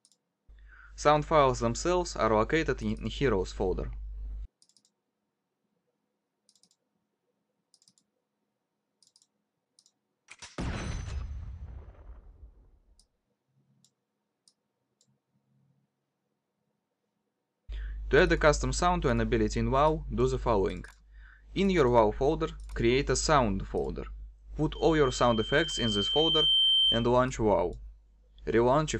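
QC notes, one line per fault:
24.75–27.15 s, loudspeaker feedback squeal: a tone at 3.1 kHz swells up over a couple of seconds until it sits a few dB above the rest of the sound. What's happening is the mic is hearing the speaker it's feeding, and at that one frequency the loop gain tips past unity, so the tone keeps feeding itself and grows until the amplifier limits it or something breaks the loop; here it stops at 27.15 s.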